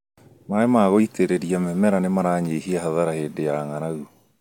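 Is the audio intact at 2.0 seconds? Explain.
Yes, the audio at 2.0 s is intact, with no dropout, click, distortion or other fault at that point.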